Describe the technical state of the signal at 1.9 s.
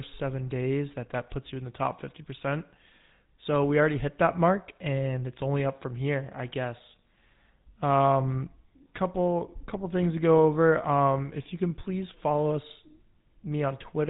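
At 1.9 s, like the whole clip, it's GSM full-rate codec audio: buzzy, gravelly speech from pulse-driven vocal-tract modelling, nothing above about 3.8 kHz, consistent with roughly 13 kbps.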